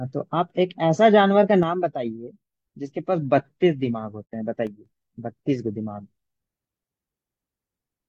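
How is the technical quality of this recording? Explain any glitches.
The recording has three audible glitches: two sudden level dips and one short gap in the speech.

One channel drops out from 1.63 to 2.54 s and again from 4.67 to 4.86 s. In both spans the speech abruptly falls by about 6 dB and returns just as sharply at the end. The likely cause is one side of a stereo signal going silent. Once the two sides are summed to mono, material common to both loses half its contribution, and anything carried only on the missing side disappears.

AAC frame loss with muting occurs from 4.25 to 4.33 s, a hole of about 85 ms, which fits two lost AAC frames. The decoder replaced the missing data with a zeroed spectrum. Because AAC frames overlap, the sound tapers away and fades back in instead of cutting off abruptly, leaving a brief, soft-edged dropout in the speech.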